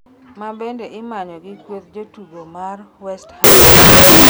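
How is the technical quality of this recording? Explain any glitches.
The recording has one serious glitch, in its final stretch. From 3.44 s to the end at 4.29 s, the speech collapses into loud, harsh noise, with the voice faintly buried underneath, running at half speed and an octave low. This is a wrong sample width fault. The pattern fits 16-bit samples being read as unsigned 8-bit bytes. Each stored sample is split into two values, which halves the playback speed, and many values mix high and low bytes. Only the bytes carrying the top bits still trace the speech, so noise swamps it.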